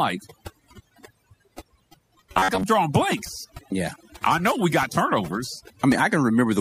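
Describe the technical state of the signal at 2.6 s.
At 2.6 s the audio is likely being rebuilt from a short buffer of about 10.7 ms, replayed over and over in place of most of the real signal. The repeats impose a rigid metallic buzz near 93.8 Hz, the robotic sound from repeated short buffers, from 2.34 to 2.63 s.

Throughout the clip, overdone noise removal cuts frequency bands whenever they approach the estimated noise floor, taking quiet parts of the voice with them. The background drops and breaks up into twinkling specks.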